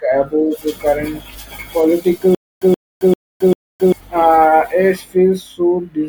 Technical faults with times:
2.35-3.92 stutter with silent gaps

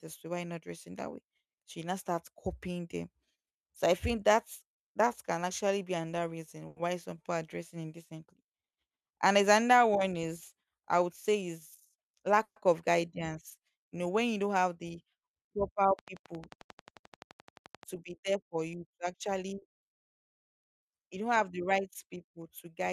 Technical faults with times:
6.67-6.81 short stall from a late packet
10.95-11.50 jitter buffer speed-up
12.43-12.58 call audio freeze
15.99-17.84 train of clicks
19.59-19.64 short stall from a late packet

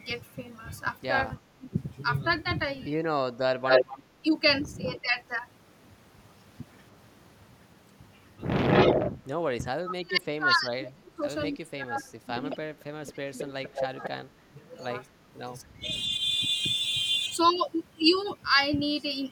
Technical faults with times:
1.42-5.16 speech suppressed in double talk
3.67-4.99 echo leak
8.67-9.11 echo leak
9.79-14.57 speech suppressed in double talk
12.50-14.09 echo leak
15.58-16.31 speech suppressed in double talk

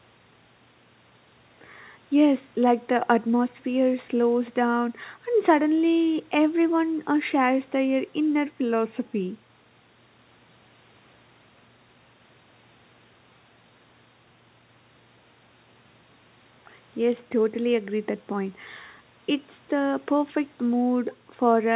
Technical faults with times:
none

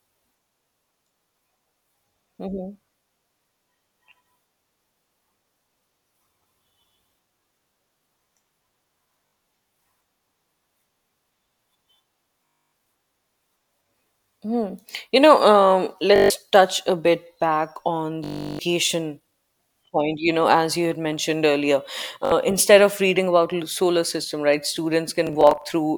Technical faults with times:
9.27-9.33 Bluetooth stutter
12.46-12.73 Bluetooth stutter
16.16-16.30 Bluetooth stutter
18.24-18.59 Bluetooth stutter
22.25-22.32 Bluetooth stutter
25.27-25.64 Bluetooth stutter

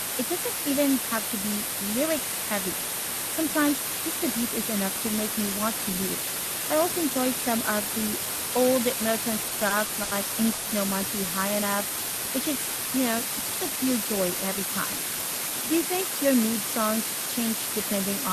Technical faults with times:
0.00-18.33 low bit depth with dither
9.43-10.13 repeated stalls (stutter)
10.53-10.67 call audio freeze

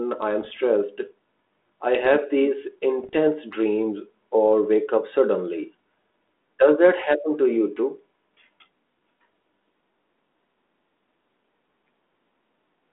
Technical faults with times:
0.42-0.57 bit errors on an ADPCM link
3.00-3.17 bit errors on an ADPCM link

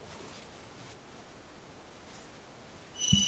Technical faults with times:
2.89-3.00 speech suppressed in double talk

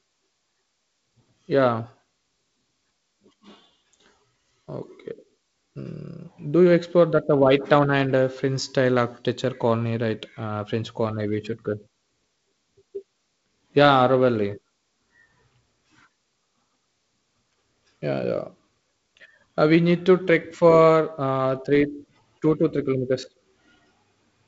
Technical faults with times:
none

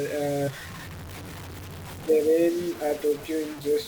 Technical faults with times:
0.00-3.87 low bit depth without dither
0.47 compressed frames skipped

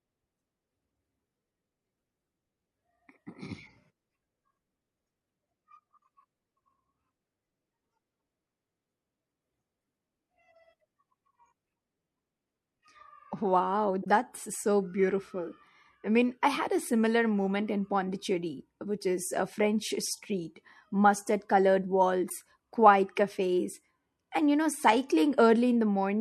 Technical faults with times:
0.00-26.21 MP3 compression
14.01-14.07 corrupt frame decoded
22.27-22.32 corrupt frame decoded

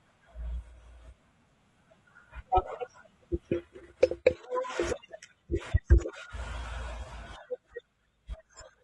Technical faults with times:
0.00-8.83 low-delay AAC compression

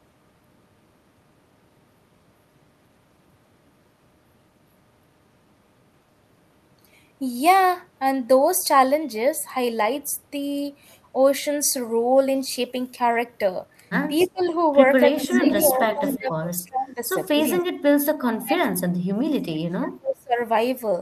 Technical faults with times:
14.21-14.51 echo leak
14.25-14.62 speech suppressed in double talk
15.11-17.12 speech suppressed in double talk
15.16-16.18 echo leak
17.40-17.51 echo leak
17.62-17.67 speech suppressed in double talk
18.11-20.38 speech suppressed in double talk

